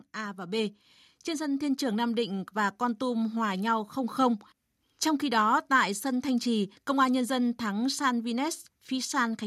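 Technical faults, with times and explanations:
0.15–4.24 s, automatic gain rising: the level swells steadily by about 8 dB over roughly four seconds, and the background noise climbs right along with the speech, so the room seems to creep closer rather than the talker simply getting louder. The automatic gain control judged the incoming signal too quiet and pushed its gain up gradually, and because it scales everything at its input, the noise floor is lifted by the same amount as the speech.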